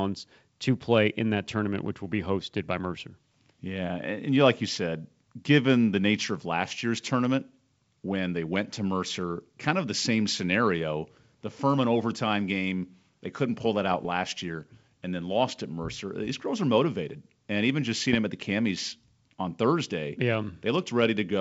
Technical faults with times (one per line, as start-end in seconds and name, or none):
13.91-14.11 bit errors on an ADPCM link
18.07-18.16 bit errors on an ADPCM link